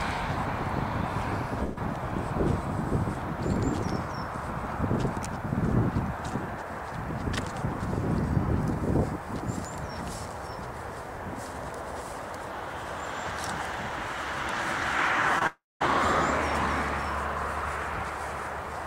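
Three network faults show up in this audio, all on the receive side. The first is a burst of packet loss from 1.63 to 1.79 s. About 120 ms of audio never arrives, and the receiver papers over the hole by carrying the last sound forward and turning it down for roughly 133 ms, so you hear a held, fading tail instead of a clean gap. When the stream picks back up, that chunk is just gone. Much later there's a short concealed packet loss at 15.39 to 15.43 s. Only about 20 ms goes missing, and the decoder extrapolates from what came just before for about 21 ms and then blends back into the real signal. It reads as a quick smear or wobble rather than a dropout, and anything brief in that slot could get swallowed. Right after that, from 15.47 to 15.82 s, comes a long network dropout. The last sound gets stretched into a decaying buzz or hiss for the first part, then there's about 0.2 s of plain silence before the audio returns partway along, with roughly 340 ms never played. 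The likely cause is the stream stalling outright rather than dropping a packet or two, landing soon after the 15.39 s glitch.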